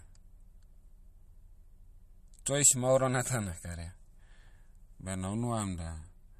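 Throughout the speech, nothing is heard above 13.9 kHz, and quiet detail sounds watery and swirly. Weak frequency components flicker in and out between frames. This is likely MP3 compression, with plainly audible damage that fits a bitrate around 48 kbps.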